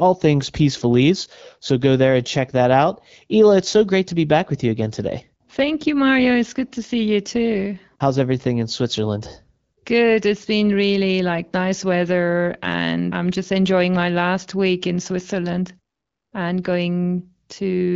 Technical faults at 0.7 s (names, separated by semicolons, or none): none